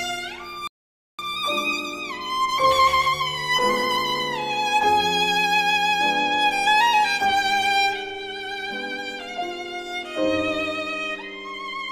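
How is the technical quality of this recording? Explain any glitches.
There's one clear glitch, a rebuffering stall early on. At 0.67 s the sound just drops out to silence and stays gone until 1.19 s, then carries on exactly where it left off. That's the player running dry on downloaded audio and waiting for more data before it can continue. Nothing gets skipped or lost, but the gap stretches the timeline by about 0.51 s. You hear it as a dead pause rather than a jump.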